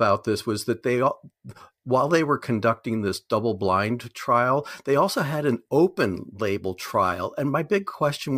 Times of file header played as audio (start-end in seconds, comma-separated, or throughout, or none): none